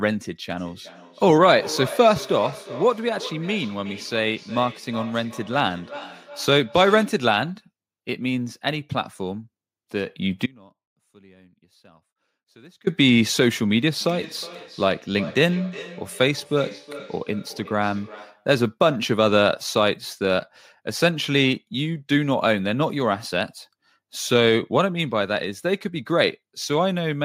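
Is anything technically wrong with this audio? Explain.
Yes, two problems. From 0.51 to 7.32 s and again from 14.01 to 18.52 s there's feedback echo between two devices. A second device in the room replays the far end and the other mic recaptures it, so the speech comes back roughly every 400 ms, up to about 15 dB and 17 dB below the speech, thinner each pass.

From 10.46 to 12.87 s there's an audio dropout to a faint residue. The speech cuts abruptly for 2.4 s, leaving only a faint sound roughly 30 dB down. That's likely the wanted signal being lost while the path after the break stayed live.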